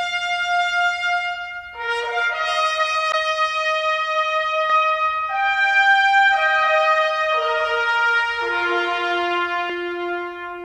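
The audio carries a doubled audio track from 4.70 s to 9.70 s: a second full-band copy runs roughly 300 ms behind the original and at about the same level, likely because the signal was captured twice through paths with different latency. The copy has no decay or added room colour, and it cuts in and out abruptly. On a spectrogram every feature in that span repeats at a fixed offset, and the waveform shows each onset echoed with equal amplitude.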